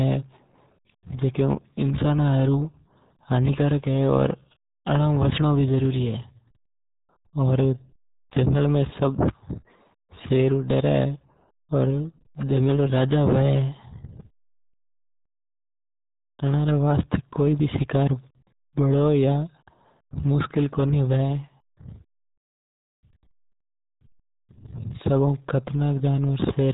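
RealAudio 14.4 codec damage runs through the whole speech clip, from start to finish. The signal has been squeezed through a very low-rate speech codec, and the heavy coding loss fits an 8 kbit/s stream of the old dial-up RealAudio 1 kind. Nothing survives above 3.8 kHz, so the speech is dull and muffled, and the coarse modelling of each frame leaves a gargly, bubbling texture over every syllable.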